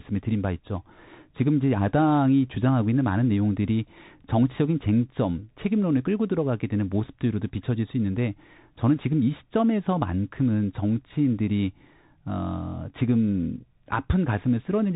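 Speech runs through a Bluetooth CVSD headset codec for the whole clip. The band stops at about 3.8 kHz, so everything above is gone and the sound is narrow and boxed in. CVSD sends one bit per sample, just up or down, with a step that adapts. The damage is plainly audible. Loud high sounds outrun the step and distort. S sounds turn scratchy. A granular hiss sits underneath. The rate fits a 64 kbps link.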